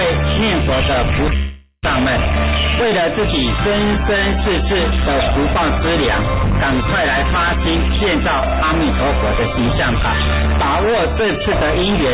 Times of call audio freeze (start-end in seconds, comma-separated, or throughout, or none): 1.36-1.85